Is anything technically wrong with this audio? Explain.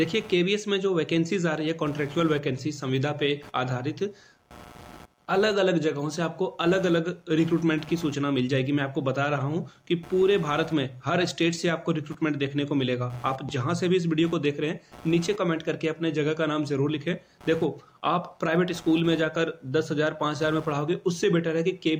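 Yes, there is one fault. Computer activity noise runs throughout: processor or mouse load shifts the shared ground, adding buzzy pulses at around 100 per second, roughly 25 dB below the sound, showing as evenly spaced vertical spectrogram striations.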